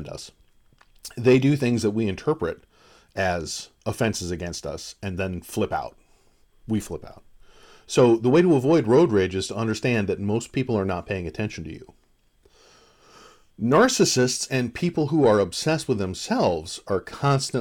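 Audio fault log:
No fault is heard in this speech recording. Nothing in the audio calls for a log entry.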